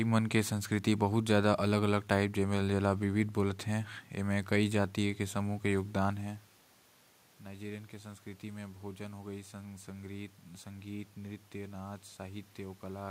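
No technical faults can be heard anywhere in the speech. There is background noise from the room, and around 6 seconds the voice changes level as the talker moves relative to the microphone.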